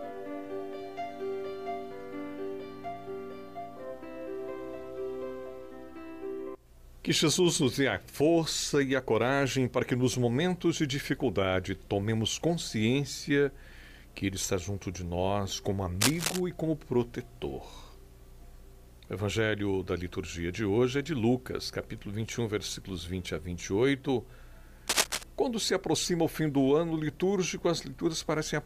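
Two bursts of cable scratch noise cut across the audio, at 16.01 to 16.40 s and 24.88 to 25.25 s, each roughly as loud as the sound itself. Their dense, uneven scratching, rather than isolated clicks, points to a worn cable, connector or control as the likely cause.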